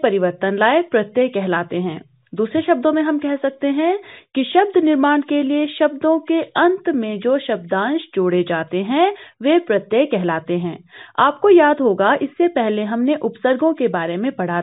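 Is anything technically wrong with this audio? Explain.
No, nothing technically wrong can be heard anywhere in this audio.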